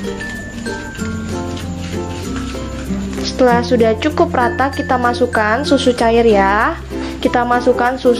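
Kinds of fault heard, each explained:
Nothing here stands out as a technical problem, so there's no kind of fault to list for this one.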